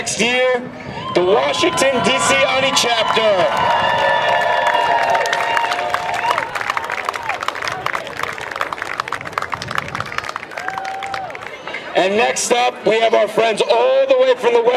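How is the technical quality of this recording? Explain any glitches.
Three brief glitches are audible. Lost LE Audio frames at 2.26 s (about 7.5 ms, fitting one frame), 6.51 to 6.53 s and 9.97 s (about 15 ms each, fitting two frames). The decoder fills each gap with the previous spectrum, signs randomised, so tones smear into a short noisy blip. On a spectrogram this shows as a thin vertical smudge, and the waveform shows a scrambled patch.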